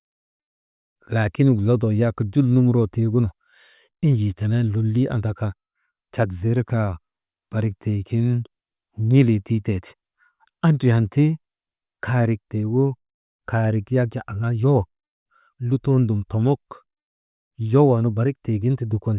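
Nothing in this recording stands out as a technical fault at any point, so there's no problem to place on the timeline.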